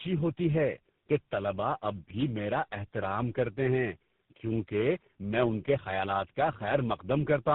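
Speech throughout shows tandem speech coding: rough, muffled, warbly sound that fits three speech coders in a row, likely G.729A, CVSD and GSM full rate, each re-coding the last one's damage. A spectrogram shows nothing above 3.8 kHz, with smeared, blurry harmonics.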